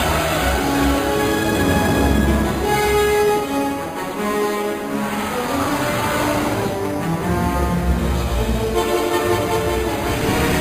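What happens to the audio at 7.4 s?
At 7.4 s the audio carries imaging from sample-and-hold upsampling, present through the whole clip rather than starting there. The sound was apparently raised from a rate near 11 kHz by simply repeating samples, so a mirrored copy of the spectrum sits between 5.5 and 11 kHz, about 17 dB below the signal. It is heard as a bright metallic fizz tracking the level. A spectrogram shows an upside-down reflection of the lower band, and the waveform looks staircased.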